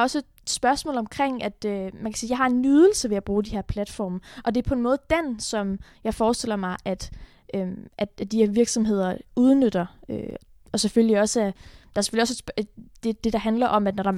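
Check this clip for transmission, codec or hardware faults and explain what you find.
There's one hardware-style fault here, a DC step at 10.31 s. At that moment the waveform's zero line jumps by about -36 dBFS, the kind of shift you get when a converter recalibrates or an offset input gets switched in. The offset then bleeds away at the rate of a 20 Hz high-pass, so it doesn't linger. You hear it as a single low thump under the speech, which carries on unchanged through it.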